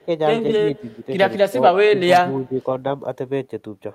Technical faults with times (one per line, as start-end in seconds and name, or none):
0.03-0.10 speech suppressed in double talk
0.62-1.08 speech suppressed in double talk
1.49-1.57 speech suppressed in double talk
1.87-2.61 speech suppressed in double talk